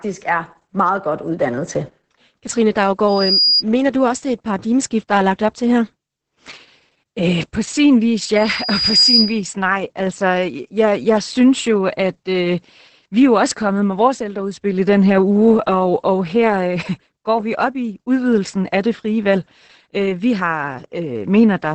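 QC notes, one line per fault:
Throughout: Opus voice compression. The encoder is running in its SILK voice mode at about 10 kbps in wideband, with 20 ms frames. Nothing survives above roughly 8.7 kHz, so the top of the spectrum is gone. The excitation is coded coarsely, so the damage is heavy: the speech comes out muffled and hoarse, with a slightly robotic texture.
3.08–3.63 s and 8.35–9.42 s: loudspeaker feedback squeal. A microphone is picking up the loudspeaker it feeds, and at 4.9 kHz the loop gain climbs past one, so that frequency reinforces itself on each pass. Both times the same piercing tone swells to about 5 dB above the speech. The first builds in around a third of a second and breaks off just before "du også det er". The second comes just after "øh på sin vis", rises more slowly over most of a second, then stops.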